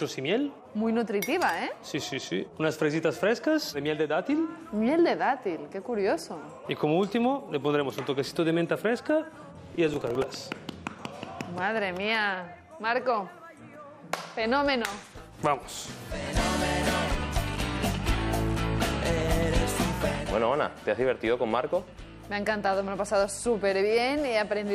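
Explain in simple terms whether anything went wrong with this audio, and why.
Between 9.75 and 10.24 s there is a short burst of gritty crackle laid over the sound: processor overload crackle. The computer briefly fell behind on very small chunks of audio, around a millisecond and a half each, and missed about ten of them over that stretch. Each miss replayed a scrap of old audio with hard edges. A single dropout is one gap or click; this is a rapid run of them that stops once the load eases.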